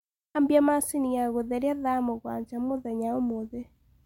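No technical faults are audible in this recording.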